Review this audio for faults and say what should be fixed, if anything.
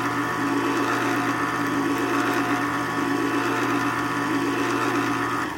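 Nothing here needs fixing; I couldn't find a fault anywhere in these everyday sounds, so it's fine to leave as it is.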